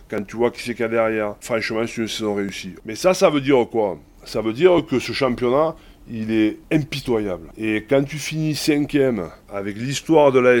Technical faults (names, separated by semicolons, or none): clock drift buffer slips